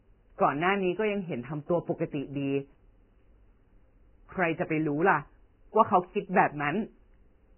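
Speech throughout with nothing above 3 kHz, and the remaining highs sound hissy and grainy, which likely points to heavy Vorbis compression at around 10 kbps.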